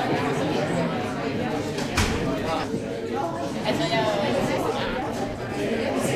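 At 2.63 to 2.65 s the audio lurches forward with no gap and no fill. About a second of sound is simply absent, and the material on either side is butted together almost directly. This is a skip ahead. A stretch of audio was discarded while later audio was already queued, either lost in transit or thrown out by the jitter buffer when it overflowed. Playback then resumed from the newer data, cutting the delay by roughly a second.

From 4.57 to 5.49 s the sound runs noticeably faster, at about 132% of normal speed, and feels rushed even though its pitch stays the same. This is a jitter buffer speed-up. The buffer was holding more audio than its target, so the receiver trimmed many short slices, each one or a few pitch periods long, in quick succession. Across that span this took out roughly a third of a second.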